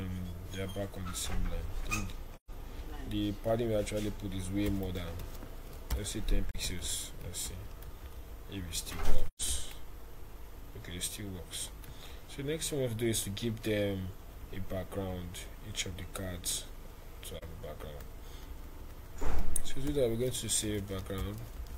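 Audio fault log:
2.35–2.50 s, 6.51–6.55 s, 9.28–9.42 s, 17.37–17.44 s: AAC frame loss with muting. Four soft-edged dropouts of 128 ms, 43 ms, 128 ms and 43 ms, fitting three, one, three and one lost frames. Zeroed spectra fade through the overlapping windows, leaving holes.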